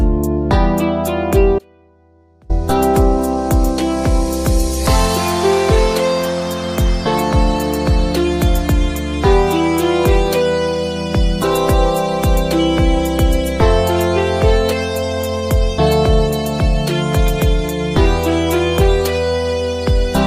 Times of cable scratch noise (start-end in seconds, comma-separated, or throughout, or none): none